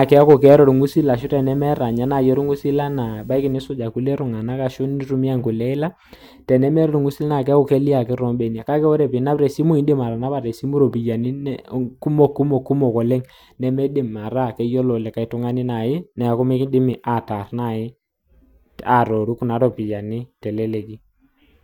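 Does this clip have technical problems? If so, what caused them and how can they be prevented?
Yes. From 0 to 3.53 s, ending just before "ilkule tunganak ashu nintumiya", video or display buzz from a screen or video cable couples in. It is a 50 Hz field-rate buzz with hash above it, roughly 30 dB below the speech, plus a 15.6 kHz line-rate whine. On a spectrogram it shows as stacked 50 Hz harmonics and a thin steady line at 15.6 kHz. Routing audio cables away from displays and video leads prevents it.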